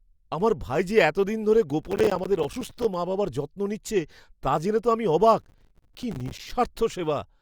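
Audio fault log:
1.70–2.94 s, processor overload crackle after "ভাই যে এতদিন ধরে": dozens of missed buffers of about 5 ms each leave tiny hard-edged silences, heard as gritty crackle until "মা বাবার যত্ন নিচ্ছে".
5.40–6.53 s, processor overload crackle after "জেনে তো আমি অবাক": a denser run of dropped short buffers tears the speech into crackle.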